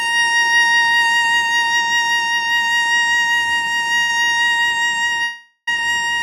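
At 4.01 s the music hangs for 77 ms, until 4.10 s. This is a short stall from a late packet. The jitter buffer ran dry, so the last sound was held. Playback then resumed at the same spot, with nothing lost.

From 5.23 s to 5.68 s comes a call audio freeze. The final sound drags on as a fading buzz or hiss, then 60 ms of silence. Delayed packets likely emptied the jitter buffer. The music then resumes where it stopped, 442 ms late.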